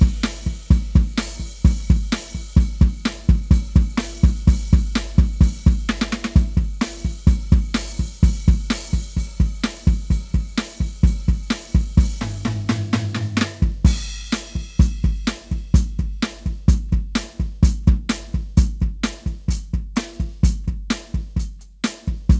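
Nothing stood out on listening to this music, which comes across as having travelled over a call connection, with nothing heard above 8 kHz.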